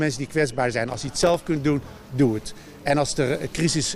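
From about 0.90 s to 1.48 s there's a patch of processor overload crackle: a gritty, tearing burst riding on the sound for just over half a second, then it clears. What's going on is the processor falling behind on its small audio buffers, missing deadline after deadline. Each miss drops a sliver of silence with hard edges, and the pattern points to about twenty missed buffers of only a few milliseconds each, strung together into that crackle.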